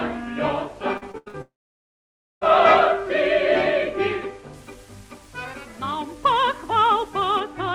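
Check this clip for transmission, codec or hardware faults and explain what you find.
Three faults stand out: a burst of repeated packet loss, a long dropout right after it, and a treble-heavy stretch from pre-emphasis left on.

From 0.97 to 1.36 s there is repeated packet loss (robotic sound). Four short holes, the longest 85 ms, are each patched by stretching the preceding sound, so about half that span is synthetic fill. It sounds choppy. Unlike a single dropout, the holes keep recurring with real audio between them.

From 1.42 to 2.43 s a long network dropout is the likely cause. Roughly a second of audio is missing. A brief buzzy or hissy continuation of the last sound fades, then about 0.9 s of near-silence follows before the audio resumes further on. That sustained silence distinguishes it from the brief, repeated patches just before.

From 4.54 to 7.40 s the audio turns thin, bright and sibilant. 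The treble sits about 8 dB higher at 10 kHz than at 1 kHz, which fits a CD-style 50/15 µs pre-emphasis whose matching de-emphasis was never applied. It is a steady tilt with no gaps. Above roughly 12 kHz the treble still rolls off, consistent with the Opus call path's bandwidth limit.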